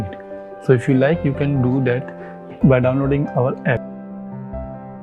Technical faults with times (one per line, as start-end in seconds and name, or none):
0.66-2.37 periodic clock jitter